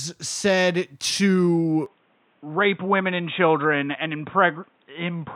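Input switched to a poorer device, from 1.86 s to the end of this speech clip: with no gap and no real change in loudness, the sound abruptly turns duller and narrower, with nothing above 3.8 kHz, and a faint new background noise appears roughly 40 dB below the speech. The likely cause is the recording system changing its input partway through, to a lower-bandwidth microphone or a headset's call profile with its own tone and noise.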